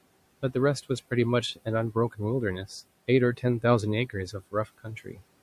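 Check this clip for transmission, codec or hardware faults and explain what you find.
One fault stands out, and it comes from processing rather than the line or hardware. Between 4.51 and 5.21 s there is speech cut by the noise suppressor. The suppressor mistook quieter parts of the speech for background. It turned them down along with the room noise, which sits about 22 dB below the speech. Roughly a third of a second is affected in total. At the deepest point the level falls by about 18 dB. Those parts sound swallowed and faint, as if they fade into the background.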